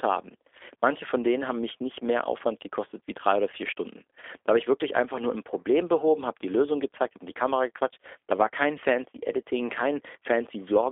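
From start to end the speech carries G.729 codec damage, plainly audible and consistent with an 8 kbit/s stream. Each short frame is rebuilt from a vocal tract filter and a few pulses, so the sound is rough and synthetic. A spectrogram shows a 300 Hz to 3.5 kHz band with nothing above 3.6 kHz.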